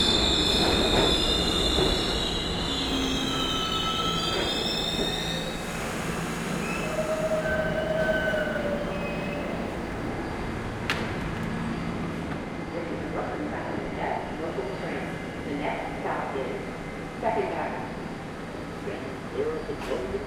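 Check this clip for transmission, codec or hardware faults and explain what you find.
One hardware fault is present: sample clock jitter, from 2.87 s to 10.08 s. The converter's clock wanders by a few microseconds. Each sample is taken slightly early or late at random. Where the waveform changes fast, that timing error becomes an amplitude error. Here it sits roughly 30 dB below the signal. It is heard as a grainy hiss riding on the sound. It grows on loud and bright passages and drops away in quiet gaps.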